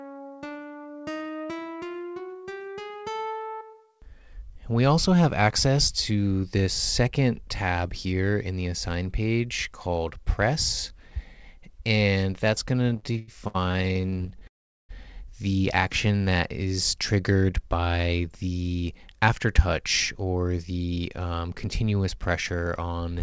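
From 12.90 to 14.43 s the audio hits repeated stalls (stutter): over twenty brief hitches in about a second and a half, the longest about 90 ms, with concealment covering roughly a third of that span. Packets were arriving later or more slowly than playback needed, so the jitter buffer kept running dry, and the receiver bridged each hole by extending the last sound. Nothing is lost, but the audio drags and catches. What sets it apart from a single freeze is the rapid chain of short interruptions rather than one long gap.

Right after, at 14.47 s, comes a call audio freeze lasting until 14.91 s. The sound carries on briefly as a fading continuation of the last sound, then drops to near silence for about 400 ms before resuming exactly where it stopped. The likely cause is a burst of held-up packets emptying the jitter buffer. The audio is delayed by about 420 ms rather than cut, and unlike the stutter it is one clean, sustained hole.

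A jitter buffer slow-down runs from 16.07 to 16.69 s. The receiver repeated tiny slices of the waveform to rebuild its reserve, playing at about 89% speed and adding roughly 77 ms. Pitch stays put while sounds are drawn out, so it reads as a stretch, not a gap.

Two jitter buffer speed-ups follow: 18.54 to 19.82 s at about 108%, trimming around a tenth of a second, and 20.22 to 21.68 s at about 112%, trimming around a fifth of a second. The receiver cut short pitch-period pieces to shed excess delay. The audio sounds hurried but keeps its pitch, which distinguishes it from a faster playback rate. Throughout, the G.722 call path leaves nothing above 8 kHz.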